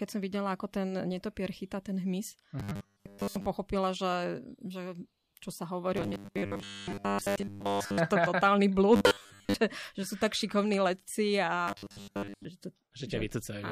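From 2.60–3.46 s, 5.97–7.98 s, 8.96–9.54 s and 11.68–12.45 s, the speech turns metallic, with a fixed 100 Hz buzz. This is robotic sound from repeated short buffers. Most of the audio is likely replaced by a repeating slice of about 10 ms.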